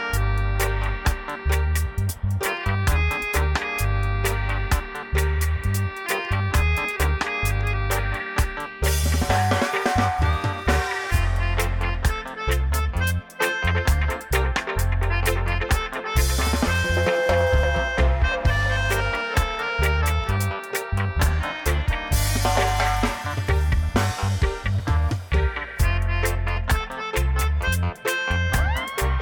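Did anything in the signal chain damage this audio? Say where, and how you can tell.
No, nothing in the signal chain audibly damaged this audio.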